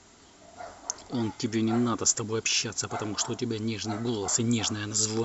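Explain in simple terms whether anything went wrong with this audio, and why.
Nothing went wrong with this audio; there are no faults to hear anywhere in it.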